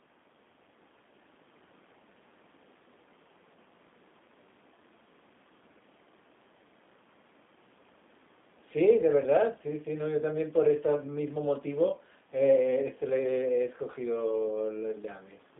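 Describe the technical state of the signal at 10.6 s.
G.729 codec damage is present at 10.6 s, as it is throughout. The sound points to an 8 kbit/s G.729 stream: the speech is rebuilt from a vocal-tract filter, pitch predictor and sparse pulses, leaving it rough and synthetic, confined to about 200 Hz–3.6 kHz, with the faint room noise warbling.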